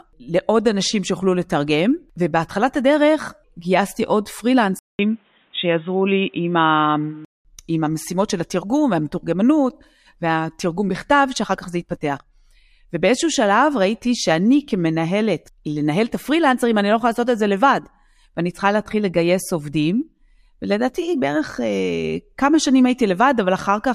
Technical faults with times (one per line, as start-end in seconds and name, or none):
4.79-7.45 input switched to a poorer device